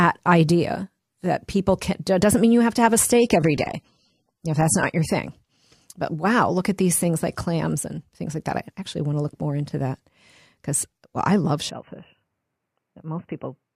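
From 3.15 to 5.15 s, just after "have to have a", an adaptive stream at a lower bitrate takes over. Codec artefacts rise suddenly without any gap, which fits a fall from 96 to 24 kbit/s AAC, and then full quality returns.

From 11.70 s to the end, after "because well I love", the sound abruptly turns dull and boxy, with nothing above 3 kHz. It is about 5 dB quieter, with a new noise floor some 55 dB down. That combination points to a likely input switched to a poorer device rather than codec damage.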